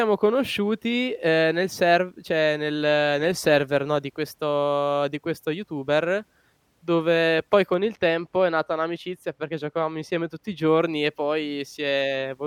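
Speech, and from 7.74 to 10.66 s it goes dull and muffled because de-emphasis was applied wrongly. A treble cut that should only undo pre-emphasis landed on audio that didn't need it, so the top end slopes away smoothly, about 8 dB down at 10 kHz.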